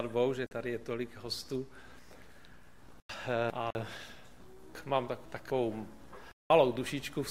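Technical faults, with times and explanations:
0.46–0.51 s: block of digital silence. A 46 ms stretch drops to silence, fitting an unfilled 2048-sample output buffer; the abrupt edges give a short hole.
3.00–3.75 s: chunks out of order. A 250 ms chunk plays two chunks late, so the passage sounds jumbled, with three hard joins.
3.70 s: block of digital silence. A 139 ms gap to silence starts with no fade, giving a brief dropout.
4.75–5.50 s: chunks out of order. Again a 250 ms chunk arrives two chunks late; the reordered audio sounds garbled at each hard join.
6.32–6.50 s: block of digital silence. A 186 ms hole, which fits an 8192-sample buffer left unfilled, cuts in and out sharply.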